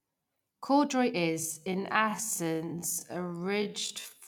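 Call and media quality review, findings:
Time-stretched section, 1.28 s to end: speech abruptly drops to roughly half pace (0.5x), pitch unchanged. Likely a time-stretch stage repeating short segments to lengthen audio. A plain playback-rate error would lower the pitch too; here it holds.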